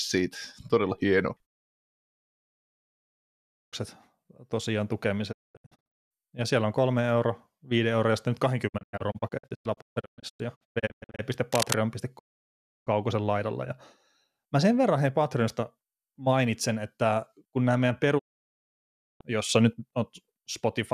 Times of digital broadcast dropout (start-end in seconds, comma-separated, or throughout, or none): 1.45-3.74, 5.31-6.12, 8.67-11.21, 12.17-12.89, 18.17-19.22